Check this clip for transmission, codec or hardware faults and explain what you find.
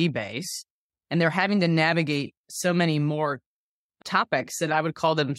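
Nothing to flag here: I've had a good listen to the speech and there's simply no fault to report.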